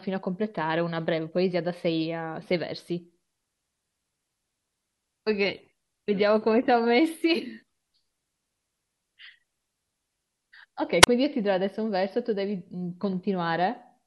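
At 11.01 to 11.07 s there is a wireless microphone squelch dropout. The radio link faded and the receiver's squelch cut the output. A short burst of hiss leads into a gap of near silence lasting about 31 ms. Then the speech returns.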